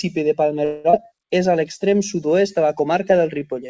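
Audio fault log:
0.65–0.96 s, long network dropout: the speech breaks into a buzzy continuation of the last sound that fades over about 280 ms and then picks up again with about 180 ms of speech skipped. This is most likely a stretch of lost packets, with the receiver concealing the gap and then resuming roughly 40 ms later than before. On a spectrogram, the harmonic bands freeze, smear and dim with no new onsets. The waveform shows a decaying, repetitive envelope and no true flat silence.
1.39–3.67 s, jitter buffer slow-down: the rest of the speech plays at about 94% speed with unchanged pitch, so sounds are drawn out. To rebuild its reserve, the receiver repeats single pitch periods and bits of pauses, adding about 151 ms overall. On a spectrogram, the harmonics run flat for longer than natural, beneath the G.722 band edge at 8 kHz. The waveform shows identical cycles repeated back to back.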